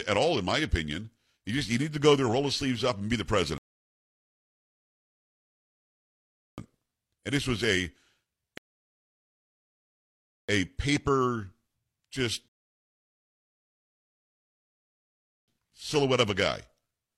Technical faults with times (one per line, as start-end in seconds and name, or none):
3.58-6.58 rebuffering stall
8.58-10.49 rebuffering stall
12.48-15.48 rebuffering stall